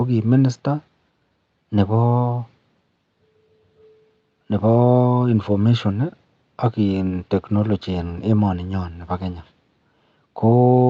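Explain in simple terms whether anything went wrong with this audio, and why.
Nothing went wrong here: the speech came through an ordinary internet call connection, which keeps the sound only up to 8 kHz as that kind of call normally does, and nothing in the signal points to a problem.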